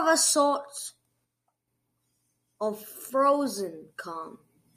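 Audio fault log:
1.25–1.68 s, one channel drops out: for a little under half a second the speech falls abruptly by about 6 dB and then jumps back to full level. That step is what happens when one side of a stereo pair is likely lost and the two channels are summed to mono. Material common to both sides loses half its contribution, so the speech halves in amplitude rather than fading. Anything carried only on the missing side disappears for that stretch.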